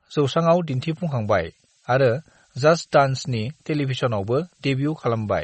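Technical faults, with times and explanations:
Throughout, MP3 compression: nothing is heard above 8.3 kHz, and the speech has a plainly audible watery, swirling quality with smeared consonant onsets. This is likely low-bitrate MP3 coding, consistent with about 32 kbps, where weak frequency lines flicker between frames. It is a steady hard ceiling, not a gradual roll-off.
0.68 s to the end, switching supply whistle: a thin high tone drifts between about 9.5 and 9.6 kHz, some 25 dB below the speech. Its wandering pitch marks a power supply cycling under changing load, unlike a fixed mains hum or a steady digital tone.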